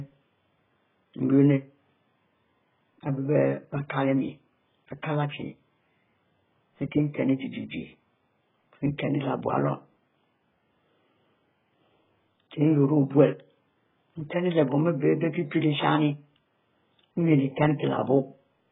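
Throughout, the speech is dull, with nothing above 3.8 kHz and a warbling, fizzy texture, likely heavy AAC compression at a very low bitrate, around 8 kbps.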